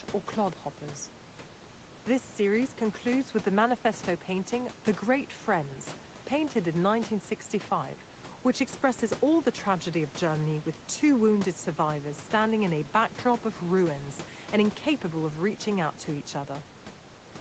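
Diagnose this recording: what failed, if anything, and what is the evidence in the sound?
Nothing failed; the speech carries no audible fault.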